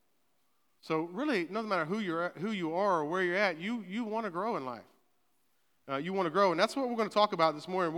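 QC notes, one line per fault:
No faults heard in this speech recording.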